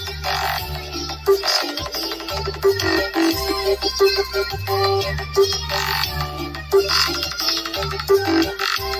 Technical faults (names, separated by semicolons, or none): noise suppressor applied to music or sounds; sound cut by the noise suppressor